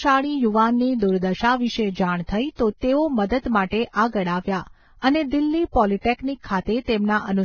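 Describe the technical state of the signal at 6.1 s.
At 6.1 s the speech carries heavy damage from what is likely Vorbis compression, running throughout: treble above 6.5 kHz is gone, and the remaining highs sound hissy and grainy, consistent with a very low bitrate. A spectrogram would show a flat ceiling and speckled, smeared upper bands.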